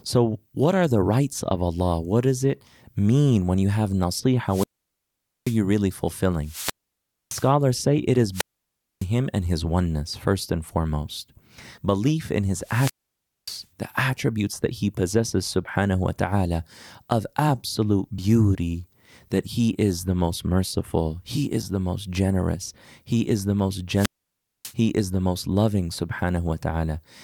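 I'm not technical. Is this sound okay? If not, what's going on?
No, it isn't. The speech cuts out five times, at 4.47, 6.41, 8.32, 12.61 and 23.93 seconds. Each time a burst of hiss comes up, the sound drops to near silence for about 0.6 to 0.8 seconds (the first gap is the longest), and then the voice comes back. That's a wireless microphone squelch dropout: the radio link from the mic faded, and the receiver muted itself rather than pass on pure static.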